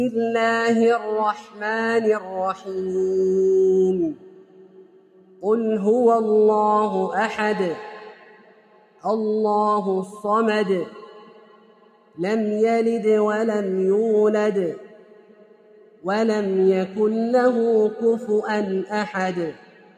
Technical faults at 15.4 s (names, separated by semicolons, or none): noise suppressor applied to music or sounds; sound cut by the noise suppressor